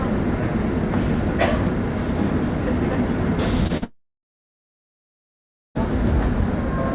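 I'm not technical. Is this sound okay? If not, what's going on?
No. Between 3.64 and 3.84 s there is short concealed packet loss: small bits of the sound went missing and the phone filled them in, leaving brief smears or wobbles. From 3.84 to 5.77 s the sound cuts out almost completely, going silent for nearly two seconds before it resumes; this is likely a long network dropout, where nothing arrived and that part is lost. Throughout, the sound has the dull call quality of a phone line, with nothing above 4 kHz.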